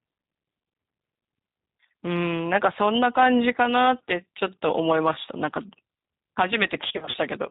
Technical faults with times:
0.00-7.50 G.729 codec
6.88-7.16 VoIP packet loss concealed by the speech codec

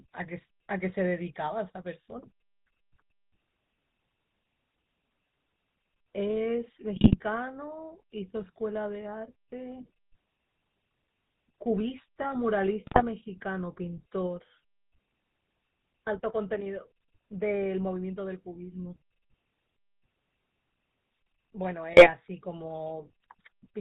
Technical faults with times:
0.00-23.81 GSM full-rate codec
6.96-7.16 GSM bit errors
12.85-13.02 GSM bit errors
21.92-22.10 GSM bit errors

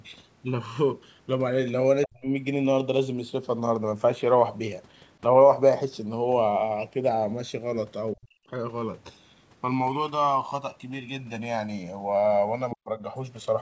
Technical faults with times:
0.00-13.61 channels drifting apart
2.03-2.07 other side's voice leaking through
2.06-2.27 speech suppressed in double talk
8.15-8.46 speech suppressed in double talk
12.71-12.75 other side's voice leaking through
12.74-13.03 speech suppressed in double talk

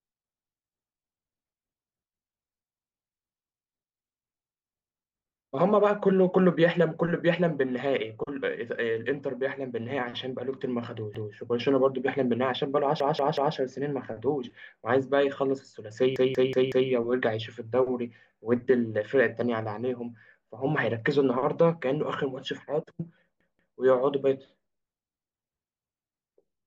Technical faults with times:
11.15-11.33 repeated buffer
13.00-13.56 repeated buffer
16.16-16.90 repeated buffer
23.41-23.78 repeated buffer

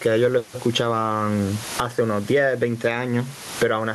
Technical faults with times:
0.00-3.94 gain pumping

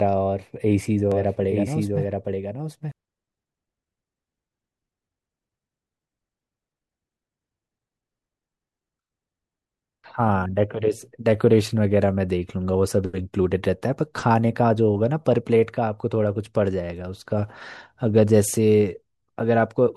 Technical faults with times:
1.12-2.92 doubled audio track

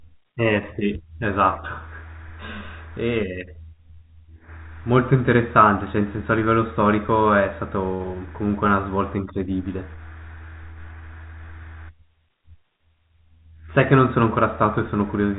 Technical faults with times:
none

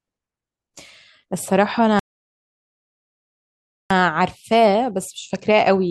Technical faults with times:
1.99-3.91 rebuffering stall

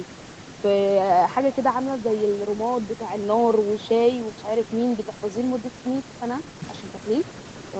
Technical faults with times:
0.00-7.79 echo with no canceller

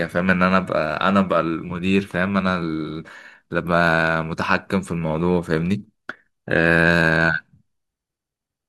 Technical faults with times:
none

